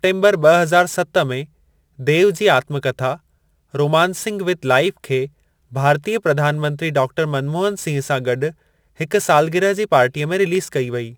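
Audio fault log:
Throughout, crude rate conversion: the speech was moved from a 44.1 kHz rate up to 48 kHz by picking the nearest existing sample instead of filtering, so some samples are simply repeated in a pattern set by the ratio between the two rates. That jitter in sample timing adds error roughly 25 dB below the signal, heard as a gritty, inharmonic fizz riding on the louder and brighter parts of the speech and fading as they fade.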